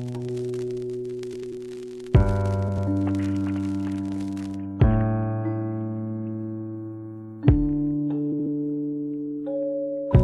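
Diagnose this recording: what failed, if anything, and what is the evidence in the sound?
What failed is frame delivery between the network and the decoder, and the result is frames out of order. At 1.33 to 1.52 s, 2.68 to 2.87 s, and 8.32 to 8.46 s the audio turns into a brief garbled flutter. Each stretch plays with its two halves swapped, roughly 93 ms each in the first two and about 70 ms in the last, which fits runs of four and three frames. No time goes missing.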